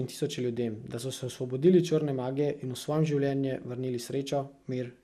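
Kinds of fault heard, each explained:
MP2 compression: The speech has likely passed through an MPEG Layer II encoder starved of bits, which fits a rate of about 80 kbps. With so little to share among its 32 sub-bands, the encoder shuts off the top bands entirely, leaving nothing above 15.1 kHz, and quantises the remaining bands coarsely. The result is a dulled top end and a plainly audible gurgling, grainy distortion that runs through the whole clip.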